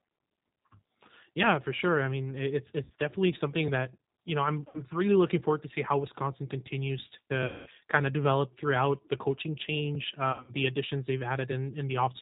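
Throughout, the speech passes through the G.729 codec at 8 kbit/s, which rebuilds it from a filter and pulse model, leaving plainly audible coding damage and nothing above 4 kHz. VoIP packet loss concealed by the speech codec hits at 2.84–2.91 s and 4.68–4.83 s (60 ms lost each), at 7.46–7.69 s (200 ms), and at 10.32–10.53 s (140 ms scattered, 80 ms longest). In each gap, the decoder extrapolates its last frame into a fading tone or coloured noise.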